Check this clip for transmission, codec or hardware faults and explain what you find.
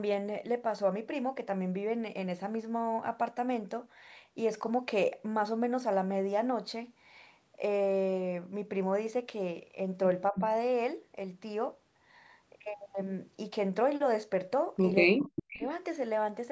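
Two kinds of fault turn up, both in the closing stretch of the speech, and both point to an echo canceller struggling on a speakerphone call.

Speech suppressed in double talk: at 10.32 to 10.37 s the level dips briefly, roughly 10 dB, for about 50 ms. At 15.06 to 15.61 s it's much worse, with the speech pushed down by around 40 dB for about half a second, so it nearly vanishes. The likely cause is the canceller failing to tell the local talker from loudspeaker echo while both sides spoke, and clamping down on everything.

Echo leak: a faint delayed copy of the speech sneaks back at 10.35 to 10.47 s, about 10 dB under the direct sound and trailing it by about 0.3 s (299 ms). Two shorter scraps follow at 15.37 to 15.41 s and 15.6 to 15.67 s, each about 15 dB down and lagging by about 325 ms. That's residual loudspeaker pickup the canceller didn't fully remove, heard as short echo bursts alongside the suppression. 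The band tops out at 8 kHz, which is what the call's microphone processing produces.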